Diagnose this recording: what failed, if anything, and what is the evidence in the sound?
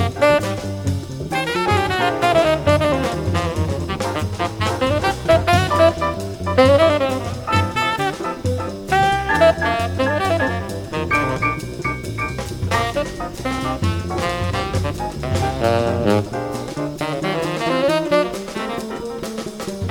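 Nothing in the recording points to a failure anywhere in the chain: the signal arrives intact and continuous, with no audible disturbance to trace back to wiring, conversion, buffering, processing, transmission, storage or playback.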